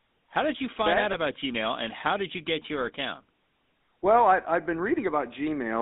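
The speech carries the GSM full-rate codec throughout, heard as a plainly audible buzzy, gravelly roughness, which fits 13 kbit/s full-rate coding. A plain telephone band limit of about 200 Hz to 3.7 kHz would only sound muffled, without that grainy pulse-driven texture. Right after "you find that out", from 1.12 to 1.15 s, lost GSM frames leave a brief rough, metallic ring: the decoder repeats the last good frame's settings across what points to a single lost frame. Unlike a dropout, the gap is filled with held sound rather than silence.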